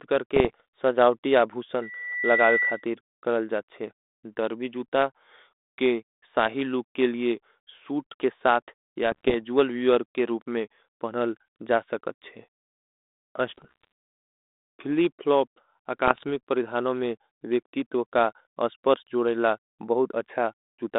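From 0.35 to 0.61 s, rough crackly pops and brief jumps in level break up the speech. These are bit errors on an ADPCM link. A fraction of a percent of the bits arrive flipped, and each bad bit throws off the decoder's step size and prediction, so the damage rings on for several milliseconds.

From 1.82 to 2.85 s a steady 2 kHz tone swells over about half a second to roughly the level of the speech, then stops just before "करल जाथ शे डर्वी". This is loudspeaker feedback squeal: a microphone picked up the loudspeaker it feeds, and at 2 kHz the loop gain went above one, so that frequency kept feeding itself.

The same ADPCM bit-error crackle returns from 9.12 to 9.35 s, between "सूट के साथ या" and "वीवर के रूप मे". It comes back from 13.49 to 13.87 s, and again from 16.06 to 16.24 s, between "फिली फ्लॉप" and "परिधानों में". Across all of this the telephone band stays narrow, roughly 250 Hz to 3.7 kHz, with only a light grain from the G.726 coding.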